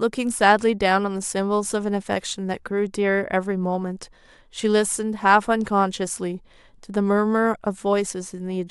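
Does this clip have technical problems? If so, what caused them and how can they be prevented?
No technical faults are audible.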